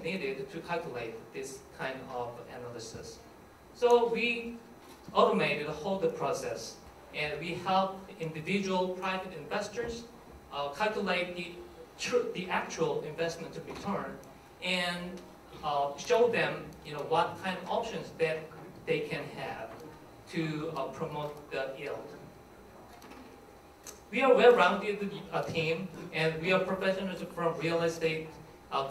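Nothing here needs pointing out; the whole clip runs without a single technical fault turning up along the way.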